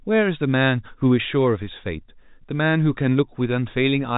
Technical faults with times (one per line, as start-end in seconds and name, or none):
none